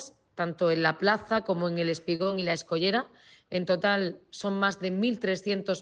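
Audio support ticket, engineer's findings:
Short stall from a late packet, 2.15–2.29 s: sound held too long, slight buzz. Jitter buffer ran dry waiting on a late packet. Receiver stretched the last sound about 37 ms, then resumed at the same point. Nothing dropped; playout delay grows by 37 ms. Unlike loss, the sound is held, not smeared, and everything after it is heard later than it would otherwise have been.

Short concealed packet loss, 2.23–2.27 s, inside the stall: brief smear or wobble. Packet never reached the decoder, so about 20 ms of real audio is gone, replaced by about 21 ms synthesized from the preceding sound, then blended back in. Unlike the stall, content is lost rather than delayed, and the timeline does not shift.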